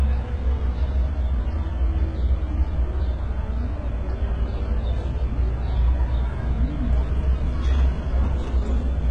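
A recording of sounds, with HE-AAC compression damage throughout. Nothing reaches above 11 kHz. The upper band sounds gritty and metallic, since it is likely rebuilt from copied lower bands rather than coded. The heavy damage fits a bitrate near 12 kbps.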